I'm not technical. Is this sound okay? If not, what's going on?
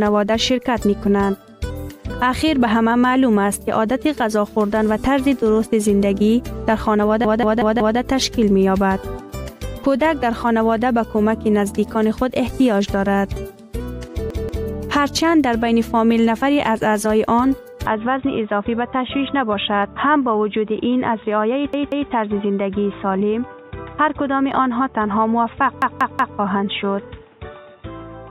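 No. There is a repeated buffer at 7.2 to 8.0, 14.3 to 14.7, 21.7 to 22.1 and 25.8 to 26.4 seconds. New audio arrived late, so one fifth-of-a-second piece replays, causing stutters.

From 17.86 seconds the input likely switched to a poorer device. The sound turns dull, with the highest tones gone and faint background hiss added.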